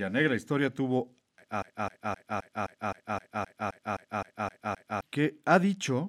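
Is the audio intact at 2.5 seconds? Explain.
No. A broken-record loop runs from 1.62 to 5.02 s, right after "negra historia tuvo a". One 260 ms fragment of speech repeats exactly, back to back, 13 times. A stalled player or stream likely kept resending its last fragment. The original audio there is lost.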